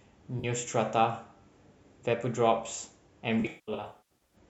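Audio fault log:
0.39–0.45 s, AAC frame loss with concealment: about 43 ms of the signal, consistent with two lost frames, is filled in by the decoder from the last good spectrum. This gives a brief smeared, noisy blur. On the spectrogram it appears as a short smudged block with blurred harmonics.
3.40–4.36 s, AAC frame loss with concealment: gaps totalling about 0.6 s are scattered across 0.9 s, which fits roughly 28 lost frames. The longest runs, around 200 ms, outlast the concealment, so the sound fades to a very faint noise floor and then fades back in. On the waveform these show as tapering envelope dips, and on the spectrogram as darkened gaps.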